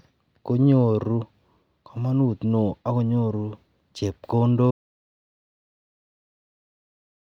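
At 4.71 s the input feed was likely lost, from a disconnected device, failed link or stray mute, while recording carried on writing silence. This audio dropout to silence cuts the speech off mid-flow and leaves dead silence, with no room tone, to the end.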